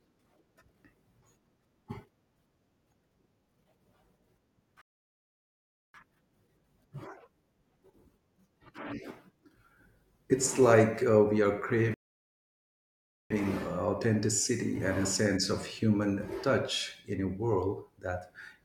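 Speech runs normally until two rebuffering stalls interrupt it. At 4.81 s the sound drops to silence and stays silent until 5.94 s. At 11.94 s it stops again, until 13.31 s. Each time, the speech picks up exactly where it left off. Nothing is skipped. The player had run out of downloaded audio and waited for more to arrive. The two stalls add about 1.13 s and 1.36 s of silence.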